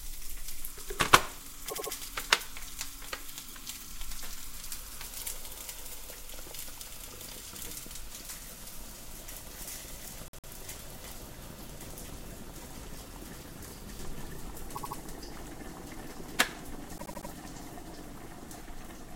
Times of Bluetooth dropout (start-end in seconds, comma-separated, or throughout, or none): none